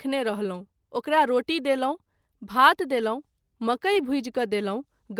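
At 3.93 to 3.97 s there is a short concealed packet loss: about 20 ms of the speech stream arrived too late for the decoder, so the receiver synthesised a stand-in by extending the preceding sound, then crossfaded back into the real signal. It comes across as a brief smear or wobble rather than a hole. Unlike a plain dropout, there is no silence or hard click, just sound that briefly continues where it shouldn't.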